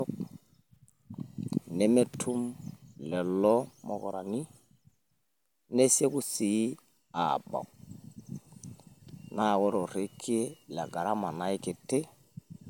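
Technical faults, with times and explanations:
Nothing in this recording stands out as a technical problem; the speech comes across without any audible glitches.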